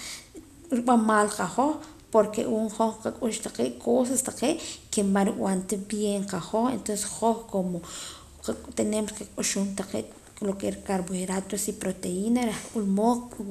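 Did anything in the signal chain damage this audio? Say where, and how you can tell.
No, nothing in the chain from capture through playback has left an audible mark on this speech.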